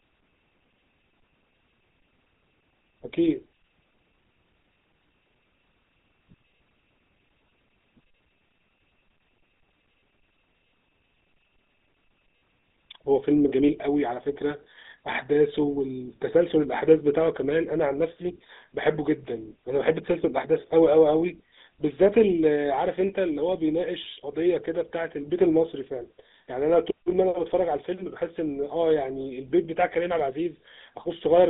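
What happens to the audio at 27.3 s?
At 27.3 s the speech sounds buzzy and gravelly, confined to a narrow band of roughly 200 Hz to 3.7 kHz, as it does throughout the whole clip. This is GSM full-rate codec damage, plainly audible and consistent with a 13 kbps coder modelling the vocal tract and driving it with sparse pulses.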